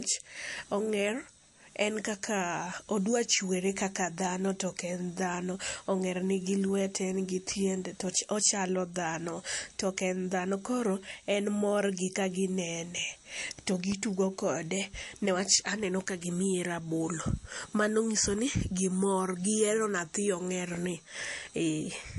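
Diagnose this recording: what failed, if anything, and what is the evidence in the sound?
The speech sounds dull and swirly for its whole length, with nothing above about 11.3 kHz and the watery smearing of heavy perceptual coding, yet the file's own bitrate is high. This is at the codec stage and is likely low-bitrate audio saved at a high bitrate: a low-rate MP3 encode, consistent with around 48 kbit/s, discarded the top octave and fine detail, and the later high-rate MP3 pass simply preserved that damage.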